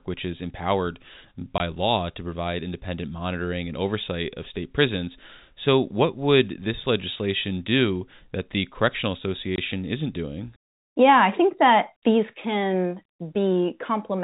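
At 1.58 to 1.60 s and 9.56 to 9.58 s, packet loss filled with silence leaves 20 ms dropouts, each fitting one lost packet, seen as flat, empty vertical strips.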